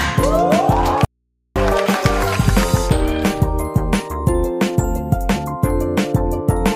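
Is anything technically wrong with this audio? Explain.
Yes. From 1.05 to 1.56 s the sound cuts out abruptly for about 0.51 s, leaving only mains hum some 55 dB down: an audio dropout to a faint residue, likely from a signal break while the path stayed live.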